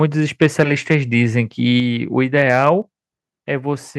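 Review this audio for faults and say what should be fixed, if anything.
Likely microphone overload from input gain set too high, at 0.41–0.63 s, 0.91–0.94 s and 2.38–2.69 s: the speech peaks exceed the converter limit by about 2 to 3 dB and are flattened, adding a harsh crackle to the loudest syllables.

Microphone volume stepped down, likely by the call software reacting to those clipped peaks, at 1.8 s and 2.82 s: the level drops abruptly by about 4 dB and then about 3 dB.

Setting the microphone input gain lower from the start, with headroom below full scale, would prevent both the clipping and the sudden corrective level drops.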